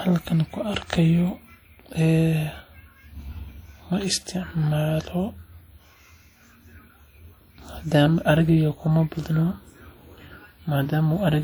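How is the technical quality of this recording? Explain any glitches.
The technical quality is limited by one fault that runs through the whole speech recording: low-bitrate audio saved at a high bitrate. The coding artefacts fit a WMA source of around 48 kbit/s that was likely re-encoded as 256 kbit/s MP3. The larger second file cannot restore the detail the first encoding discarded, so those artefacts remain. The band still reaches about 20.2 kHz, so there is no audible cut-off.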